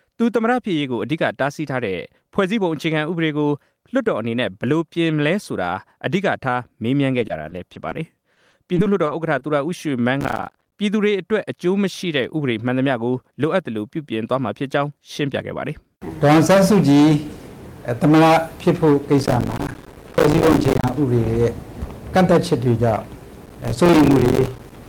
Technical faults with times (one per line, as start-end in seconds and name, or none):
7.19-7.97 repeated packet loss (robotic sound)
8.35-9.43 repeated packet loss (robotic sound)
10.21-10.72 processor overload crackle
19.18-20.94 processor overload crackle
23.41-24.76 processor overload crackle